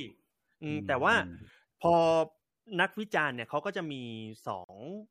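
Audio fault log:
4.64–4.69 s, gap at a join of encoded pieces: the speech drops into a gap of about 47 ms with smeared edges, then resumes where it stopped, as separately encoded segments were joined without trimming the encoder's start delay and final-frame padding.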